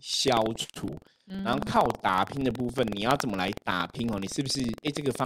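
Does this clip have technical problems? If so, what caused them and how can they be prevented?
Yes. Buffer tearing runs throughout the speech, heard as a robotic rattle at 21.5 Hz while sound is present. Writer and hardware reader have slipped and cross within each period, so a small slice of every buffer replays audio from about a tenth of a second earlier, with hard joins on both sides. The rate fits a 2048-sample buffer. Keeping the write position safely ahead of the read position, and resynchronising after any slip, prevents it.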